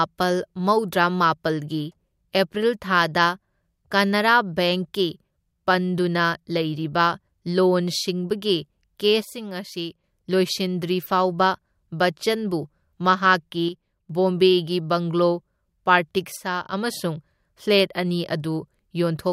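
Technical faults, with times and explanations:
9.25–10.04 s, 13.69–14.10 s and 16.37–16.73 s: one channel drops out. Each time the level falls abruptly by about 6 dB, then recovers. The last one ends just before "ꯑꯃꯁꯨꯡ ꯐ꯭ꯂꯦꯠ ꯑꯅꯤ". The likely cause is one stereo channel going silent, leaving the mono sum at half amplitude.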